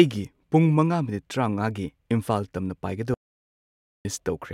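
At 3.14 s the speech cuts off mid-flow into silence until 4.05 s, an audio dropout to silence of about 0.91 s. The input was likely lost while recording continued. Unlike a natural pause, no room tone survives.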